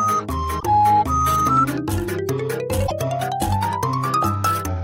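At 0.56 to 0.64 s and 2.86 to 2.91 s, damaged data in a compressed stream makes the decoder lose sync, giving brief glitches.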